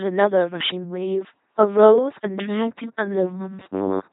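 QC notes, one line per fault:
Throughout: LPC-10 vocoder. Heavily damaged 2.4 kbit/s coding makes a buzzing, mechanical voice, with each moment either pulse-driven or hiss. On a spectrogram, frames switch between even harmonic combs and flat noise, with nothing above 3.8 kHz.
3.36–4.12 s: robotic sound from repeated short buffers. The speech collapses into a rigid metallic buzz at 93.8 Hz, likely from one short stretch of about 10.7 ms being replayed while new audio is skipped. Most of this stretch is repetition. On the waveform, near-identical cycles recur every 10.7 ms. On the spectrogram, a fixed comb of 93.8 Hz multiples appears.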